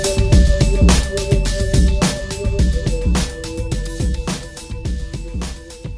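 Nothing in the audio stood out as a technical problem on listening.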